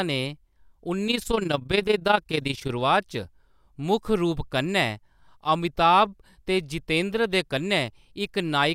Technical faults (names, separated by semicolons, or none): overlap-add ripple